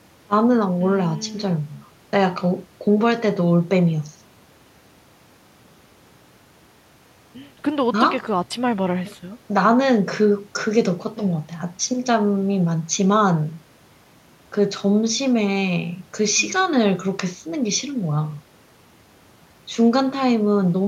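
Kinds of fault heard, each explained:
No technical faults can be heard.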